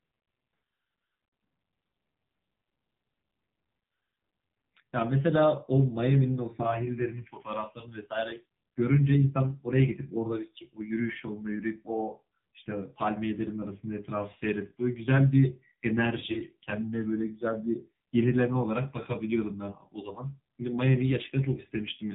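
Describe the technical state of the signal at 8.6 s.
At 8.6 s you're hearing the AMR narrowband mobile codec, which runs through the whole clip. Nothing gets past 4 kHz, and the speech comes out buzzy and synthetic because the encoder rebuilds it from a rough vocal-tract model, which fits a low mode around 5.9 kbps.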